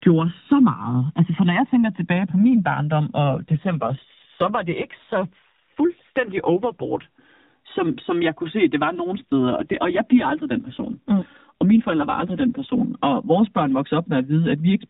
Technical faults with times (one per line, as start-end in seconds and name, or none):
0.00-14.89 channels drifting apart
3.24-7.06 AMR rate drop
9.05-12.82 AMR rate drop